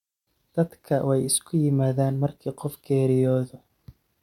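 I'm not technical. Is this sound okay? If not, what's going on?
Yes, nothing in this recording stood out as a problem when I listened to it.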